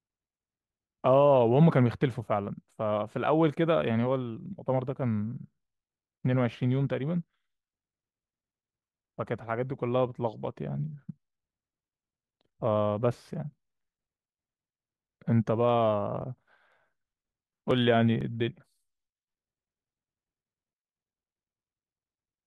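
Periodic USB or driver dropouts run from 16.22 to 20.69 s: about every 0.496 s something stalls the audio path, and a few milliseconds of speech are skipped outright. Roughly ten such gaps give a regular train of small ticks through the speech.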